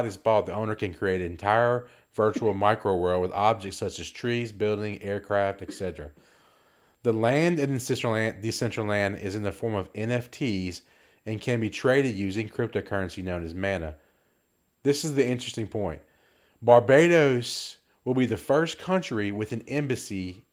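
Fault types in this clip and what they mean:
No fault types are present in this clip.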